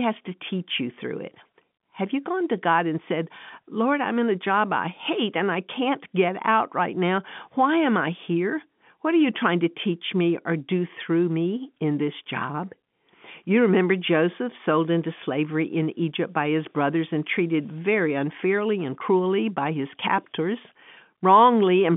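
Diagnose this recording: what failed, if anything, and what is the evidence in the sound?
Nothing failed: the speech sits in the ordinary telephone band of about 150 Hz to 3.5 kHz, which fits a normally working G.711 mu-law line, and no stage in the chain shows a problem in the sound.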